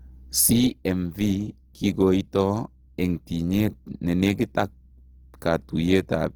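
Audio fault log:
Throughout, Opus compression: the speech turns rough and grainy, with noisy texture where detail should be, which likely comes from Opus in its music mode at around 16 kbps filling starved bands with folded or noise content while keeping full bandwidth up to about 20.2 kHz.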